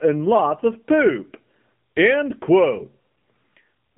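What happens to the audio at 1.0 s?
At 1.0 s the speech, like the whole clip, carries the AMR narrowband mobile codec: pulse-excited vocal-tract modelling sounds buzzy and synthetic, fitting a low rate near 8 kbps. A spectrogram shows everything cut off above 3.8 kHz.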